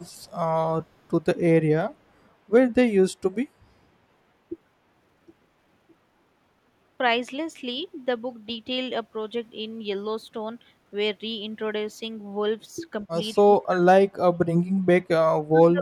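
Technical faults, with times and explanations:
0.00–0.07 s and 0.26–0.31 s, echo leak: a faint copy of the speech returns 213 ms late, roughly 35–40 dB down, likely loudspeaker pickup the echo canceller missed.
13.12–13.16 s, 13.41–13.90 s, 14.06–14.93 s, 15.49–15.81 s, speech suppressed in double talk: speech drops by up to roughly 35 dB, likely an echo canceller attenuating it while both sides talked.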